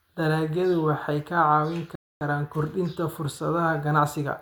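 At 1.95 s the speech drops into silence and picks up again at 2.21 s from exactly where it stopped, with nothing missing. This is a rebuffering stall: the player exhausted its downloaded audio and waited for more, adding about 0.26 s.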